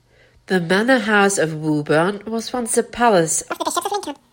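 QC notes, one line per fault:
3.52–4.33 s, audio read two samples at a time (double speed): for the last stretch of this speech clip everything suddenly runs twice as fast and jumps a full octave up, 12 semitones. It sounds like the reader grabbed pairs of samples as single frames, as if it thought the stream had two channels or samples twice as wide. Half the material gets skipped, which is why any strong content above a quarter of the sample rate folds back down.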